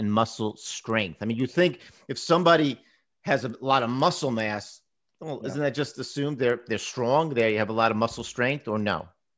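A resampler restarted on every block, converting each 100 ms chunk in isolation (which fits a 44.1 kHz to 16 kHz conversion), leaves small edge errors heard as steady ticks at 10 Hz throughout the audio.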